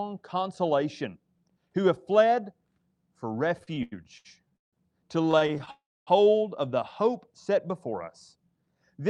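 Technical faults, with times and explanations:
3.59 to 4.75 s and 5.23 to 5.69 s, repeated stalls (stutter): The sound keeps catching and dragging. The first run has 7 gaps filling about 393 ms, with the longest at 159 ms, so roughly a third of that stretch is stretched-out last sound. The second run, just before "of the hope set", has 8 shorter gaps of up to 20 ms. Packets were arriving behind schedule, so the jitter buffer kept draining, and the receiver held the last sound each time until it could carry on. Nothing is lost.
5.71 to 6.09 s, call audio freeze: Right after the second stutter and before "of the hope set", the sound hangs on a held tone that fades, then drops to about 260 ms of silence. It then picks up where it left off. The likely cause is packets held up in transit long enough to empty the buffer. The receiver bridged the 358 ms wait, which inserts that much gap and adds that much delay.
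8.51 to 9.10 s, jitter buffer speed-up: After "hope set before us" the ending runs about 7% fast, so it feels a bit rushed but keeps the same pitch. The buffer had built up extra audio, probably from the earlier hold-up, so the receiver trimmed many tiny pitch-period-sized slices in quick succession to get back on target, removing about 50 ms in total.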